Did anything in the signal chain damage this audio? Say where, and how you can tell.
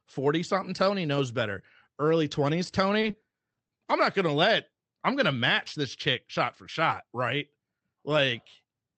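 Yes. Repeated packet loss (robotic sound) occurs between 3.01 and 3.71 s, a network-stage fault. Seven short gaps, the longest about 20 ms, were patched by extending the preceding sound, about 130 ms filled in all. Roughly a fifth of that stretch is concealed, giving the choppy texture with pieces missing.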